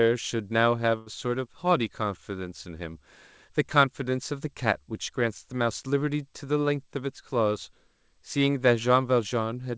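Right near the start, from about 0.98 to 1.08 s, there's a burst of packet loss. Roughly 80 ms of the speech never made it to the receiver in time, so the concealment stretched the last bit of sound across the hole and faded it down. When the audio comes back, it has skipped ahead, and that stretch of speech is simply gone. All of it sits on top of a call-codec band that tops out around 8 kHz, which fits G.722.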